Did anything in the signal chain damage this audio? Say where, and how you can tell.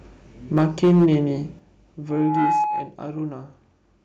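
Yes. Microphone overload hits the converter stage from 0.57 to 1.15 s. The peaks go about 5 dB past full scale, and around a tenth of the samples are flattened, giving a harsh crackle. The waveform shows squared-off tops. The likely cause is input gain set too high.

The microphone volume stepped down three times in call processing: by about 2 dB at 0.58 s, about 6 dB at 1.59 s and about 5 dB at 2.64 s. Each step drops the whole level, background included, and shows as a sudden step in the waveform envelope. The software is likely reacting to the clipping.

A loudspeaker feedback squeal runs from 2.09 to 2.95 s. A single 841 Hz tone swells over roughly a third of a second to about 5 dB above the speech. On a spectrogram it is a thin horizontal line that brightens. It arises because the microphone picks up its own loudspeaker and the loop gain exceeds one.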